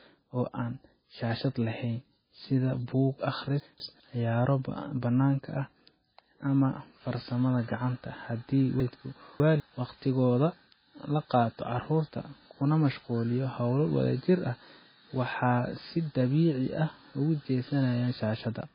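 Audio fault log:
throughout, MP3 compression: likely a heavily starved low-bitrate encode, about 16 kbps, with nothing above 5 kHz, leaving the speech dull, watery and swirly with smeared consonants.
3.6–4.0 s, chunks out of order: a 200 ms chunk landed one place late after "shaashad laheyn sida buug", so the sound jumbles before "ciyaaro bannaanka ah".
8.8–9.6 s, chunks out of order: a 200 ms chunk played three chunks late, scrambling the order with hard joins into a garbled, jumbled stretch.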